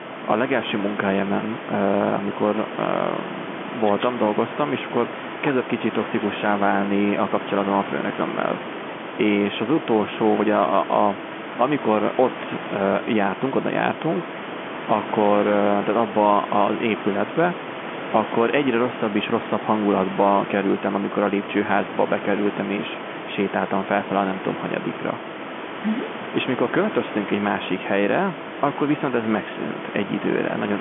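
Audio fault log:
Nothing stood out on listening to this telephone-band speech, with room noise sitting about 10 dB below it.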